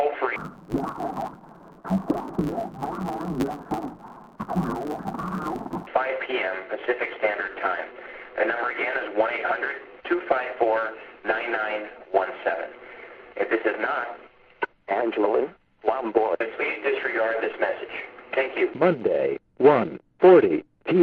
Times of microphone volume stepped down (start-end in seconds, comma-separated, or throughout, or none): none